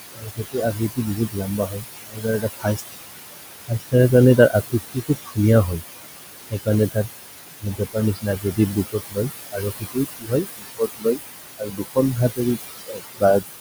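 From the start, overdone noise removal pushes the background down and breaks it up into twinkling specks. What sets it apart from milder suppression is that whole frequency bands are switched off outright.

Noise suppressor artifacts also run throughout. The room noise, about 9 dB under the speech, is pushed down by about 18 dB between phrases and rises back up beneath them, so the noise pumps with the speech.

Speech cut by the noise suppressor swallows soft consonants and word endings, with drops of up to about 22 dB. It happens at 0.15–3.1 s (about two seconds of that stretch), 3.68–3.94 s, 4.37–5.83 s, 6.5–7.08 s, 7.6–11.2 s (roughly a second and a half affected), 11.58–12.4 s and 12.75–13.44 s. Unlike the pumping, these losses fall on the speech itself, not the gaps.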